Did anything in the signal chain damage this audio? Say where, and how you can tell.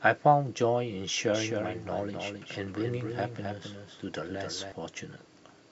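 Yes. From 1.34 s to 4.72 s the speech carries a second, full-band copy of itself trailing about a third of a second behind and a few dB quieter. It sounds like a flat, clean repeat with no room decay, and it cuts in and drops out abruptly at those times. That is a doubled audio track, most likely the same signal captured twice, with a slower monitoring or driver path adding a delayed duplicate.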